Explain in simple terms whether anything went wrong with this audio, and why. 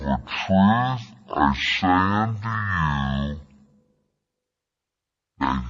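Something went wrong from start to finish: the speech plays at exactly half speed and a full octave lower, so it sounds slow and deep. This is stereo read as mono. The left and right samples were treated as one long single channel, doubling every stretch of time. Ordinary slow playback can be any amount slower, but here it is precisely half, and a faint, thin, high-pitched ghost of the sound rides along with it.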